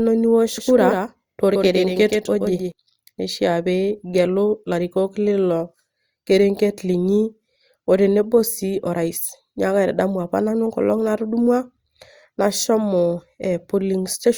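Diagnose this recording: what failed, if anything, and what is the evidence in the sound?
A doubled audio track runs from 0.58 to 2.72 s: the speech is joined by a dry, full-band copy trailing by roughly 150 ms and a few dB quieter, switching on and off abruptly. The likely cause is a second, slower capture path mixed in at the driver or routing stage.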